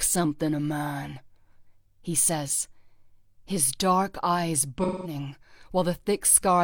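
AAC frame loss with concealment from 4.83 to 5.15 s: the decoder repeats the last good spectrum, which fits about five lost AAC frames. On a spectrogram this shows as a smeared, flattened patch.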